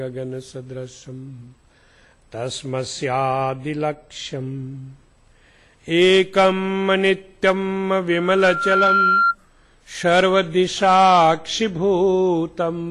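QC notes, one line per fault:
8.11 to 9.35 s, loudspeaker feedback squeal: a steady 1.4 kHz tone swells up over most of a second and ends up about 5 dB above the rest of the sound. The mic is hearing its own speaker, and at that frequency the loop gain tips past one and feeds itself.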